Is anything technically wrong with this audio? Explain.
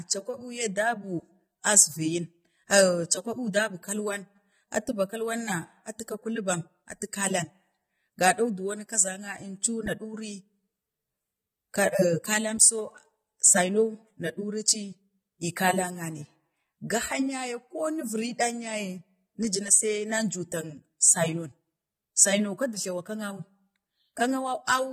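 Yes, the speech carries audible AAC compression damage from start to finish. The likely cause is AAC-LC coding at a low bitrate; the smearing fits something around 32 kbps. To save bits, the encoder quantises each block of frequency lines coarsely against a hearing model, so fine detail is lost and high bands are discarded. The sound is dull and smeared, with fizzy, warbling sibilants. A spectrogram shows a hard ceiling at 15.1 kHz with nothing above.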